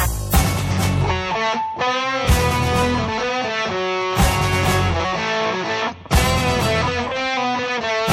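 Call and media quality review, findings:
MP3 compression, full clip. Music sounds watery. Likely a starved encoder cutting highs and dropping weak frequency lines. Damage plainly audible, fitting a 64 kbps encode.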